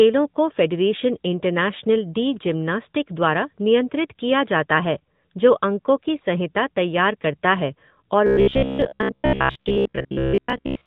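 From the very start the whole clip has that AMR narrowband mobile codec sound. Nothing gets through above about 4 kHz, so the speech is boxed into the old phone band and loses its air and sibilance. The codec rebuilds the voice from a vocal-tract model fed with a handful of pulses, and here the damage is plainly audible, with a buzzy, synthetic edge that points to a higher-rate mode of around 10 kbps.

At 8.27 s it turns robotic and stays that way to the end at 10.86 s. The speech collapses into a stiff metallic buzz pitched at about 67 Hz. It still loosely tracks the original. The likely cause is repeated short buffers: new audio wasn't arriving fast enough, so playback looped the last chunk of roughly 15 ms over and over, and most of that stretch is repeats rather than fresh audio.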